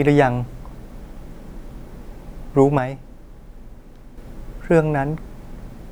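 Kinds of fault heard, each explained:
One channel drops out: from 2.78 to 4.18 s the speech abruptly falls about 6 dB and then snaps back. That level step likely comes from one side of a stereo pair vanishing, which leaves the mono sum with only half the signal.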